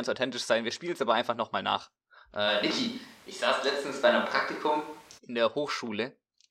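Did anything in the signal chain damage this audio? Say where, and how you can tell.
Yes. Right after "aber einfach nochmal nach", at 2.48 s, the speech suddenly goes roomy and hollow, with the low end thinned out, then snaps back to close and full at 5.17 s. That's a switch to a distant microphone at the capture stage, likely the close mic dropping out and the recording falling back on one further off. Level hardly moves, but room noise rises to roughly 30 dB below the speech.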